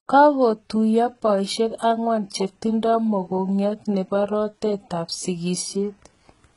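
Throughout, s sounds are gritty and lispy, likely from heavy HE-AAC compression copying lower bands upward; a spectrogram shows blocky, repeated treble ending sharply at 11.1 kHz.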